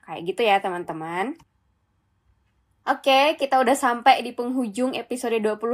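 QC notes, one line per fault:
No faults heard in this speech recording.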